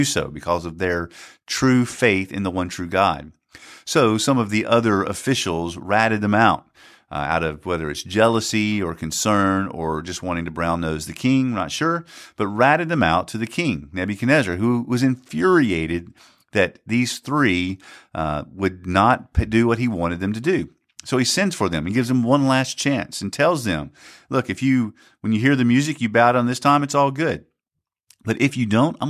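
A speech recording with nothing technically wrong to report. No moment in it needs a time or a cause.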